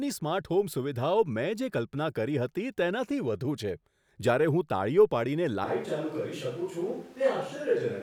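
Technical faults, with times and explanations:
5.65 s to the end, switch to a distant microphone: the speech abruptly turns roomy and hollow, loses its low end, drops by about 5 dB and gains a background noise bed roughly 30 dB below the voice. This is likely a change from the close microphone to one much further from the talker, such as a camera microphone. At that distance the pickup carries more room reflections and ambient noise, and less of the body a nearby capsule catches.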